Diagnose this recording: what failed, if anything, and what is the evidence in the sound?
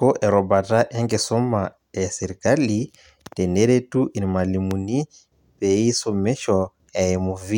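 A voltage spike in the analogue wiring, likely from a plug or switch, adds a single loud pop at 4.71–4.74 s, about 10 dB above the speech.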